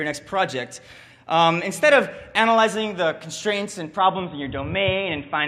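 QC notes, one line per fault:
3.98 s to end: input switched to a poorer device, likely; sound turns dull and boxy, nothing above 3.8 kHz, new noise about 30 dB down.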